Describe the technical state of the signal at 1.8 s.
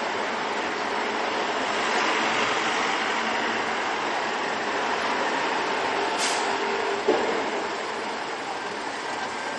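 MP3 compression damage is present at 1.8 s, as it is across the whole clip. The audio stops dead at about 11.5 kHz, and the weaker detail below that cutoff flickers in and out from moment to moment, giving a watery, swirling texture with smeared onsets. The likely cause is an encoder that ran short of bits, dropping the top band and zeroing faint frequency components frame by frame, which fits a low bitrate of around 48 kbps.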